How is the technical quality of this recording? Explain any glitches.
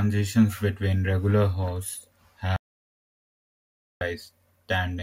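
The recording has one glitch, an audio dropout to silence from 2.56 to 4.01 s, just after "between regular hosts". The input was likely lost, with the recorder writing silence, so the speech cuts off mid-flow into 1.45 s of dead silence without room tone.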